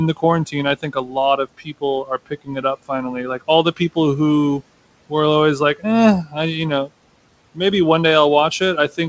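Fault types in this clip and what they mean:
Speech cut by the noise suppressor: soft speech mistaken for noise turned down about 12 to 19 dB, fading out rather than breaking off like a dropout.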